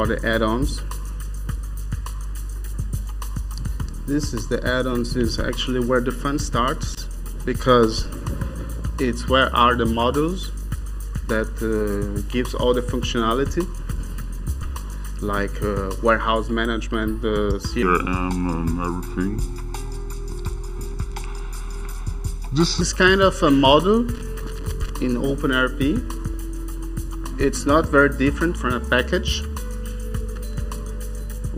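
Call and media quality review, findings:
Channel delay (comb filtering), whole clip: hollow, phasey tone. One channel lags by under a millisecond before mono sum. Notches evenly spaced from around 700 Hz upward.

Loose connector crackle at 6.90–6.98 s, 24.15–24.90 s and 30.36–30.54 s: irregular scratchy bursts. Intermittent contact chopping the signal.

Section at the wrong speed, 17.83–22.81 s: audio slowed to 0.807x, pitch down roughly four semitones. Likely clock mismatch in the editing or playback stage.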